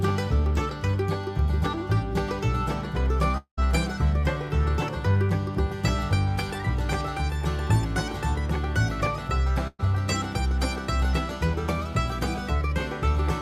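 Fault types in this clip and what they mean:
Long network dropout: From 3.37 to 3.59 s the sound becomes a fading buzz or hiss, then brief silence. This is likely a dropout, losing about 0.2 s.
Burst of packet loss: From 9.67 to 9.81 s several packets went missing. The last sound is held and fades, and about 0.12 s is lost.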